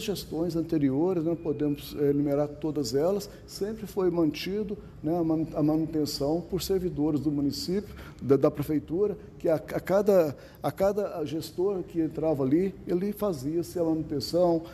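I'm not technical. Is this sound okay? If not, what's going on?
Yes, nothing stood out as a problem when I listened to it.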